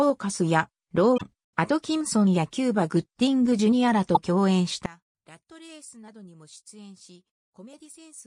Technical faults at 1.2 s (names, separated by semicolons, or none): damaged data in a compressed stream